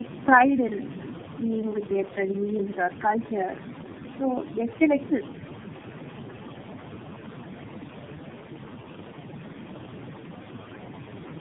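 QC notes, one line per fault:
Throughout: tandem speech coding. The speech sounds rough, muffled and warbly, with nothing above 3.6 kHz. This points to three low-rate speech codecs in a row, each re-coding the last one's decoded output. Room noise sits about 11 dB below the speech.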